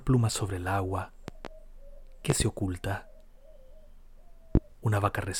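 Three bursts of loud pops sit on top of the speech. At 1.28 to 1.48 s there's a quick double pop, about 10 dB above the speech. At 2.30 to 2.44 s there's another pair, hotter at around 20 dB. At 4.55 to 4.59 s a single sharp one hits about 25 dB over. The speech carries on underneath each time. The likely cause is sudden voltage spikes from a connector, switch or static getting into the chain.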